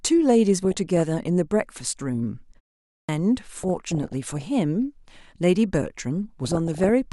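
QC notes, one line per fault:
0.63–1.00 s, 3.63–4.42 s, 6.45–6.90 s: DAB burbling. Bit errors below 1 percent slip past error correction, corrupting sub-band samples and scale factors, so bands jump frame by frame, giving short blips of noise and sudden level jumps in single bands.
2.94–3.09 s: clipped start after a pause. After a 0.42 s silence the output device wakes late, swallowing about 147 ms, so the speech begins abruptly without its onset.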